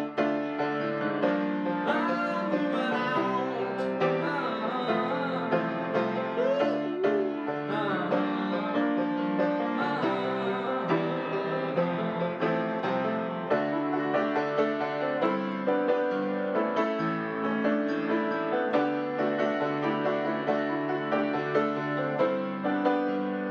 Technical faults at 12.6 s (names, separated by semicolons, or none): none